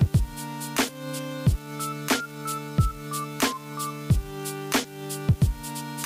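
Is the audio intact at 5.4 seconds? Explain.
No. At 5.4 seconds, as everywhere else in the clip, an unreliable data bit is corrupting the samples. One data line is marginal, so its bit comes out wrong in a random share of samples. Each error adds a spike of identical size, about -38 dBFS. Heard together, these spikes form a steady crackle or fizz that sits on top of the sound and carries on through the quiet gaps.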